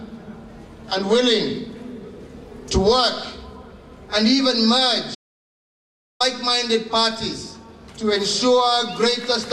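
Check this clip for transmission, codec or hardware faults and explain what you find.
One fault stands out: an audio dropout to silence from 5.15 s to 6.20 s. The sound stops abruptly in mid-flow and resumes just as suddenly, and for about 1.05 s in between there is nothing at all, not even background noise or room tone. That dead, silent gap points to the input being cut off, likely through a momentary disconnection or mute, while the recording chain kept writing silence. Whatever occurred in that second is lost.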